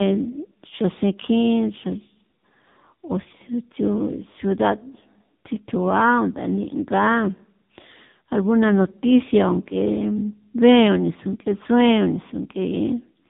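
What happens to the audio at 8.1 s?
Tandem speech coding at 8.1 s, present throughout the clip: the speech sounds like it passed through two speech codecs in a row, probably ending in a low-rate AMR-NB stage, each re-coding the previous one's errors. It sounds rough, muffled and warbly, with nothing above 3.8 kHz.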